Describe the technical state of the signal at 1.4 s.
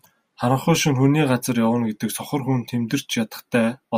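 The signal at 1.4 s is intact, with no audible fault at that moment.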